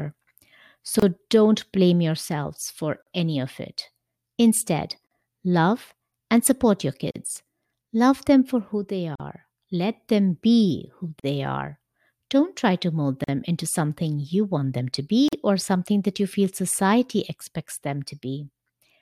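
Gaps at joins of encoded pieces break the speech at 1.00, 3.02, 5.07, 7.11, 9.15, 11.20, 13.24 and 15.28 s. They recur every 2 s. Each is a silence of 43 ms, except 28 ms before "don't blame yourselves for". Untrimmed encoder delay and padding leave abrupt dropouts with smeared edges.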